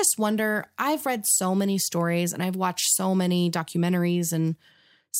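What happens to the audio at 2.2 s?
Nothing goes wrong at 2.2 s: the speech carries straight through that moment with no dropout, click, glitch or change in level.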